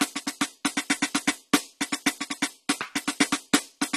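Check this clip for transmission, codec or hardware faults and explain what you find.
One codec fault runs through the entire clip. The music sounds dull and smeared, with a warbling, fizzy texture on sustained sounds and nothing at all above 13.6 kHz. This is AAC compression, likely AAC-LC at a low bitrate around 32 kbps, where the encoder discards the top band and quantises the rest coarsely.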